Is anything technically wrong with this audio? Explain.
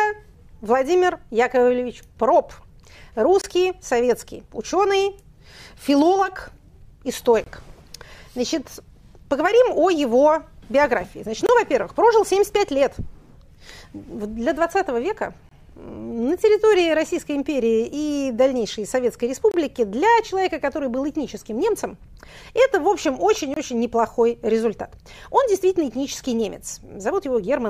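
Yes. Six brief, hard-edged dropouts of about 25 ms interrupt the sound at 3.41–3.44, 7.44–7.46, 11.46–11.49, 15.49–15.51, 19.51–19.54 and 23.54–23.56 s, evenly spaced. This is a gap between chunks: the audio was handled in 4 s blocks, and silence was inserted at each join.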